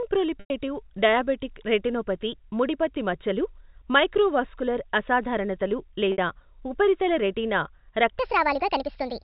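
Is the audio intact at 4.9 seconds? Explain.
Yes, the audio is intact at 4.9 seconds, with no fault at that moment beyond the narrow telephone band of the G.711 coding it passes through.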